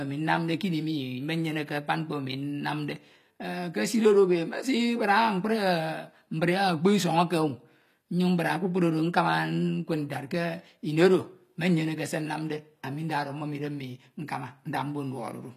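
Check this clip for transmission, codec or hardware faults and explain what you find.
One codec fault runs through the whole speech clip. The treble sounds synthetic and gritty, with s sounds coming out metallic and lisped. Nothing is present above 14.9 kHz. The likely cause is HE-AAC compression at a low rate, and the damage fits a bitrate around 24 kbps. Only the lower spectrum is truly coded. The top band is rebuilt by copying lower bands upward under a coarse envelope. Its harmonics no longer match the real ones.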